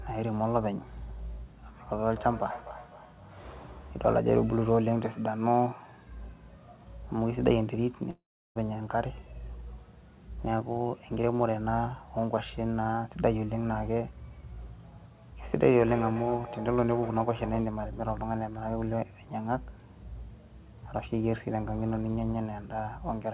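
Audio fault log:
2.07–4.25 s and 14.30–17.79 s, feedback echo between two devices: each phrase returns roughly every 0.3 s as distinct repeats, thinner and more ringing each pass, peaking about 15 dB and then about 13 dB below the speech. The fixed interval and the growing ring set it apart from room reverberation, which smears smoothly. It comes from a second device in the room replaying the call into its microphone, where neither echo canceller can remove it.
8.10–8.57 s, long network dropout: the last sound is stretched into a fading buzz, then about 0.35 s of near-silence follows, and the speech resumes with roughly 0.46 s missing. The synthetic fill and the skipped content distinguish it from a plain mute or pause. The likely cause is packets that never arrived, hidden by the receiver's concealment. The call path's 4 kHz band limit applies throughout the clip.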